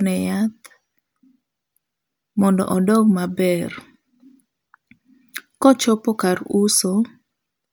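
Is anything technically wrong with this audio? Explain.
No, nothing in this speech recording stood out as a technical problem on listening.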